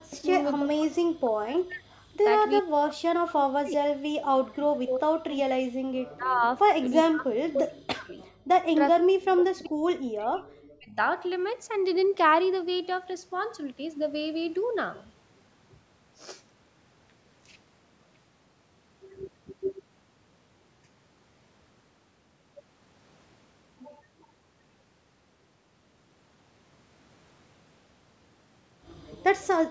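From 0 to 0.32 s, 0.58 to 2.03 s, 2.61 to 3.89 s, 4.45 to 6.44 s and 6.77 to 8.21 s, the speech dips and breaks up, dropping by as much as about 40 dB. This is speech suppressed in double talk, likely from an echo canceller attenuating everything while both sides spoke. On a spectrogram the energy fades or vanishes in patches, and the waveform shows sudden hollowed stretches.

From 8.25 to 8.31 s comes a brief echo leak. A faint copy of the speech returns about 402 ms late at roughly 35 dB below it, likely residue the canceller missed. It appears as a faint, smeared trace that repeats earlier patterns.

From 8.92 to 10.97 s, speech suppressed in double talk returns, gouging the level by up to about 40 dB.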